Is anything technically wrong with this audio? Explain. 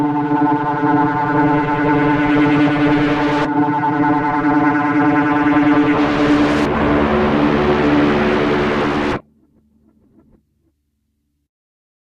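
Yes. At 5.95 s the sound jumps abruptly forward with no silence at the join: roughly 0.7 s of audio is simply missing, and the material on either side is butted straight together, so the flow breaks with a sudden discontinuity. This is a skip ahead: a block of audio was discarded, either in transit or by an overflowing jitter buffer, while later audio was already queued. Playback resumed from that later point, cutting the delay by about the same amount.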